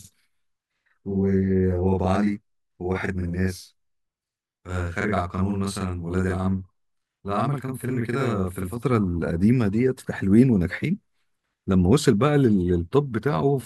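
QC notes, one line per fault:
0.00–8.77 s, channel delay (doubling): one channel of the pair is running a whole buffer late, about 42.7 ms, which fits a 2048-sample buffer, and the two channels are then summed to mono. The late copy lands at the same level as the original but far enough behind it to be heard separately, so the speech sounds doubled, with a short slap echo trailing each syllable, until the channels fall back into alignment at 8.77 s.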